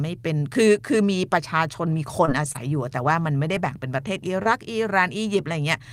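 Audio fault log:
1.91–4.47 s, scattered short gaps: about three lost or late packets, each under roughly 30 ms, patched by extending preceding sound, leaving brief ticks and smeared hiccups in the speech.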